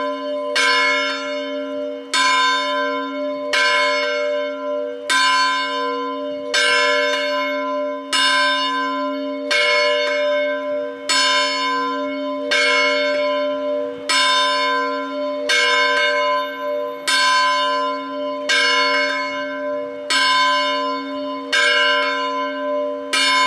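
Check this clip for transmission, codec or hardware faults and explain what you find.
Nothing in this one points to a transmission, codec or hardware problem, so there's no fault to report.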